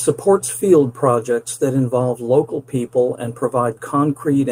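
Nothing stood out on listening to this speech recording.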